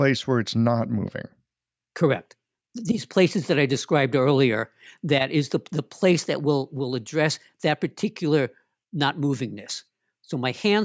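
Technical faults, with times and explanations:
No technical faults are audible anywhere in the speech recording, so there is nothing to log.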